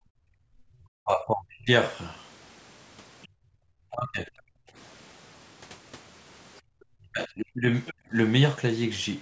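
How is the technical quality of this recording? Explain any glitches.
The recording has clear echo-canceller trouble typical of a two-way call. The audio tops out around 8 kHz, as call processing does.

Speech suppressed in double talk occurs from 0.3 to 1.7 s, 3.91 to 4.29 s, and 6.98 to 8.13 s. The talker's level sinks hard in pieces. The deepest dip is about 35 dB in the first stretch, about 25 dB in the second, and about 30 dB in the third. About a second is lost in the first stretch. The likely cause is both sides talking at once. The canceller could not tell the talker from the loudspeaker echo, so it ducked everything.

The other side's voice leaks through in two brief scraps, at 3.22 to 3.28 s and 7.86 to 7.93 s. These are short fragments of a second voice. The first sits about 30 dB below the talker. The second is louder, about 20 dB below. This is likely loudspeaker sound reaching the microphone and surviving the echo canceller. 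Each scrap lasts well under a tenth of a second.

Background is gated by the echo canceller at 3.28 to 3.63 s, 4.57 to 4.75 s, and 6.61 to 6.70 s. The room tone drops away by about 31, 30 and 29 dB, then snaps back. The gaps last roughly 0.4, 0.2 and 0.1 s. The canceller clamped the microphone while the loudspeaker played. The first gate follows right after the leak at 3.28 s.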